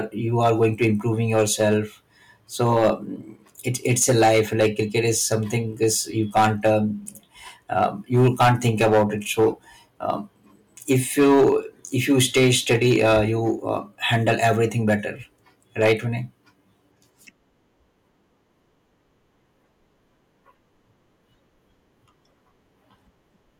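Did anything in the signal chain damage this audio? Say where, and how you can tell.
Yes. The speech shows hard clipping from start to finish, at a gain stage or converter driven past full scale. Every loud syllable carries a harsh, gritty fuzz rather than clean peaks. The overload is large, about 11 dB beyond what the stage could pass. Only a small share of samples, around 2 percent, go over, so quieter passages stay clean. Those peaks are sheared flat, and the flat tops spray harmonics high up the spectrum.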